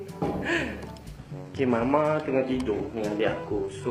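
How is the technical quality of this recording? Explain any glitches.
The recording has one problem: a sudden quality drop partway through that lasts to the end.

Adaptive stream at a lower bitrate, 1.17 s to 3.91 s: the player switched to a leaner stream when the connection slowed. The sound abruptly loses everything above 12.3 kHz and turns thinner and more synthetic, with no gap at the switch.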